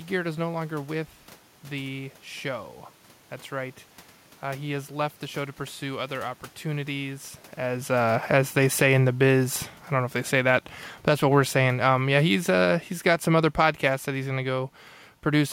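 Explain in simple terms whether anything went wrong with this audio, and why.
Automatic gain falling, from 7.91 to 13.32 seconds: the recording system decided the incoming sound was too loud, or its background noise too strong, and began turning its own volume down, step by step, over those five or so seconds. You can hear the speech sink noticeably, and the room noise in the background sinks right along with it, because the whole signal was lowered together. The shift in level near 7 seconds, when the talker moved relative to the microphone, is natural and not a fault.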